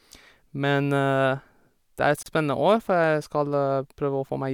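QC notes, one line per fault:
2.23–2.26 s, gap at a join of encoded pieces: the speech breaks off for about 35 ms, then resumes exactly where it left off, with nothing lost. Encoder start delay and end-frame padding were kept at the splice. Smeared edges separate it from a clean dropout.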